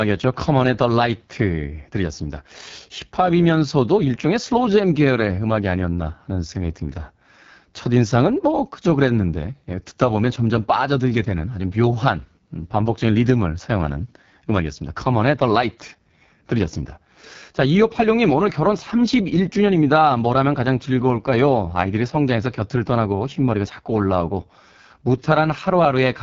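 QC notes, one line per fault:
Throughout: AMR wideband (HD Voice) codec, heavily damaged; speech sounds rough and raspy with nothing above 7.2 kHz, which fits the lowest rate, around 6.6 kbit/s.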